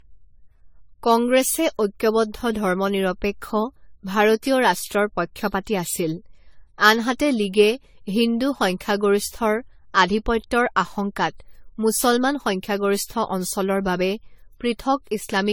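Generation loss runs throughout the speech, from start to finish. The sound is swirly and hollow, with smeared consonant attacks and no content above 19.7 kHz. The likely cause is repeated lossy coding, the character pointing to something like AAC-LC at 64 kbit/s applied around ten times over. Each decode and re-encode quantises again on a shifted frame grid, so noise and spectral holes build up beyond what one pass at that rate would leave.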